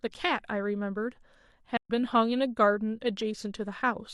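At 1.77 s the speech fades into silence and returns at 1.90 s, a gap of about 128 ms, which fits three lost AAC frames. This is AAC frame loss with muting: the decoder zeroed the spectrum of the missing frames, and the overlapping transform windows fade the sound down and back up over roughly a frame at each edge. Those soft edges set it apart from a sample-level dropout, whose abrupt cut and resumption click.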